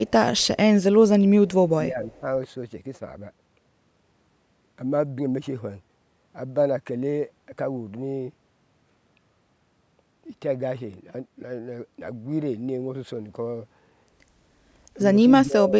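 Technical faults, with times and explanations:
0.07 to 0.11 s and 2.05 to 2.2 s, echo leak: a faint copy of the speech trails 271 ms behind, likely a loudspeaker echo that the far end's echo canceller let through.
0.35 to 0.58 s, 1.47 to 1.54 s, 1.77 to 2.25 s and 15.45 to 15.77 s, speech suppressed in double talk: the speech briefly dips by up to about 15 dB, likely because the echo canceller ducked the talker while both sides spoke.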